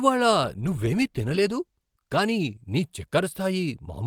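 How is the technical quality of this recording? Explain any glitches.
Quality is degraded by a call bitrate drop from 0.48 s to the end. A fallen bandwidth estimate pushed the encoder from 64 kbps to 20 kbps, bottoming out for 1.64 s, so the speech is coded coarsely, sounding rough and muffled with its high frequencies cut.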